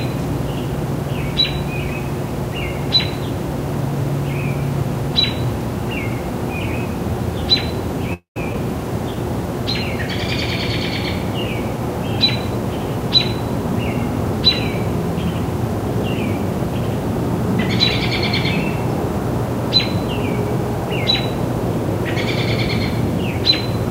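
At 8.13 s there's a call audio freeze lasting until 8.37 s. The last bit of sound gets stretched out into a buzzy, hissy tail that fades, and the final 120 ms or so is silence. Then playback resumes right where it stopped. Nothing's actually lost; about 224 ms of wait has been spliced into the timeline. The likely cause is packets stalling in transit, so the jitter buffer drained and the receiver had to improvise until they showed up.

Right after, at 8.53 s, there's a short concealed packet loss. Roughly 50 ms of audio never made it to the decoder in time. Only a sliver, about 8 ms, got patched over by extending the preceding sound, and then it blends back in. So what you hear is a quick smear or wobble, with a small chunk simply gone. That also claws back a few tens of milliseconds of the delay the freeze added.

From 12.50 s to 13.68 s you get a jitter buffer speed-up. The buffer was sitting on more audio than it wanted, so the receiver trimmed out lots of tiny pitch-period-sized slices, about 50 ms in total. 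That makes playback run at around 104% of normal speed with the pitch unchanged. Events in that stretch come a touch early.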